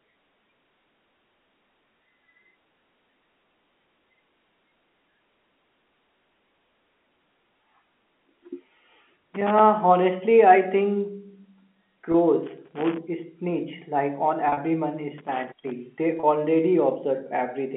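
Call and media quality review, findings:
Loose connector crackle, 9.34–9.59 s, 12.47–12.98 s, 15.18–15.72 s. Irregular scratching bursts over the speech, a quarter to half a second each. Probable component: worn or dirty jack or cable contact intermittently breaking the circuit. On the waveform: chopped signal. On the spectrogram: dense broadband vertical streaks across the whole narrow telephone band.

Packet loss with pitch repetition, 12.12–12.14 s, 14.49–14.57 s, 16.20–16.23 s. The 12.12 s gap (20 ms) and the 16.20 s gap (30 ms) sound like brief held, buzzy tones. At 14.49 s, 70 ms missing across 80 ms, longest run 40 ms, giving a stuttering buzz with dips. Probable component: network jitter or loss, concealed by the receiver looping the last pitch period. Lost durations fit 10 ms packets. On the spectrogram: frozen, evenly spaced harmonics. On the waveform: repeated identical cycles, fading on the longer run, then a short cross-fade back. 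Everything sits inside the 200 Hz to 3.4 kHz band of the G.711 A-law path.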